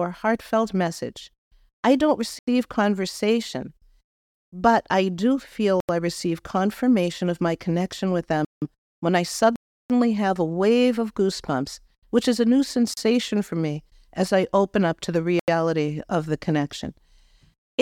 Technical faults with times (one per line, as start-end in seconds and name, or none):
2.39-2.47 block of digital silence
5.80-5.89 block of digital silence
8.45-8.62 block of digital silence
9.56-9.90 block of digital silence
12.94-12.97 block of digital silence
15.39-15.48 block of digital silence